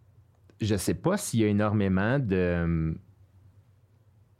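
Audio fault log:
No technical faults are audible anywhere in the speech recording, and the signal holds continuity throughout.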